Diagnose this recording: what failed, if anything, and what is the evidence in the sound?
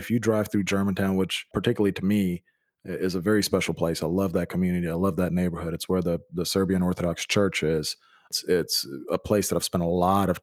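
Nothing in the recording points to a failure at any stage, from the wiring and converter through to storage and playback; the speech signal holds continuous and stable for its whole duration.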